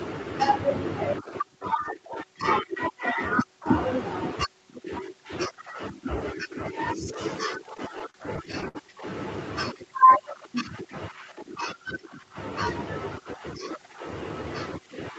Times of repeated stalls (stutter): 7.77-8.77

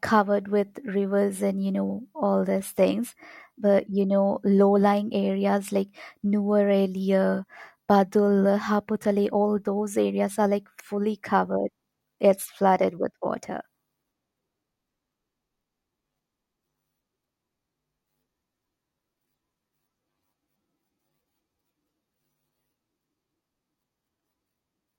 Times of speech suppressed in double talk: none

